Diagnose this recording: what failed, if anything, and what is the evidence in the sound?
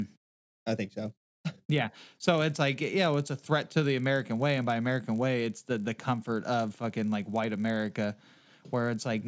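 A 50 Hz buzz rides the speech throughout, only under signal: in sample-rate conversion, the resampler restarted on every 20 ms block, erring at each edge.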